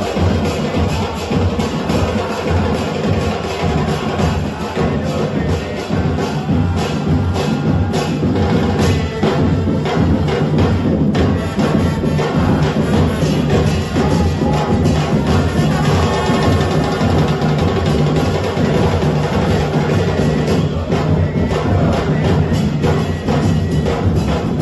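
From start to finish the audio carries video or display buzz, picked up where a screen or video cable couples into the audio path. A buzz at the 50 Hz field rate sits under the sound with hash above it, plus a thin whine at 15.6 kHz from the line scan, the whole buzz roughly 45 dB below the signal. On a spectrogram this shows as steady horizontal lines at 50 Hz and its harmonics, and a single unbroken line at 15.6 kHz spanning the whole clip.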